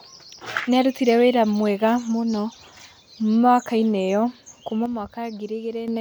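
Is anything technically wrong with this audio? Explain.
Yes. One channel drops out from 4.86 to 5.88 s: the speech suddenly falls by about 6 dB, then recovers. The likely cause is one stereo side going silent, so after the mono sum only half the shared signal remains, and anything unique to that side vanishes.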